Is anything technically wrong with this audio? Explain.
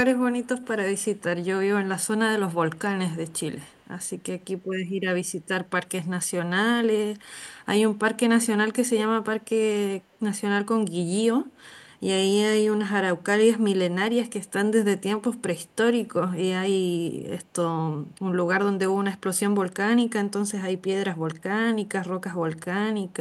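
Yes. Echo leak at 0.43–0.47, 0.97–1.18, 3.26–3.40, 3.65–3.86, 10.13–10.18 and 14.46–14.51 s: faint scraps of the speech return 146 ms late, roughly 35 to 40 dB down, likely from a loudspeaker echo canceller letting residue through.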